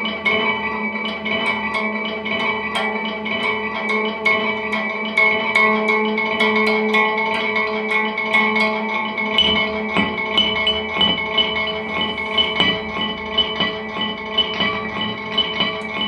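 Nothing here calls for comment, as the audio runs along without any technical faults to point out.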